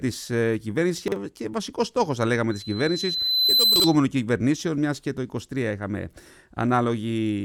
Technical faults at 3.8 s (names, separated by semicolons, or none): loudspeaker feedback squeal; chunks out of order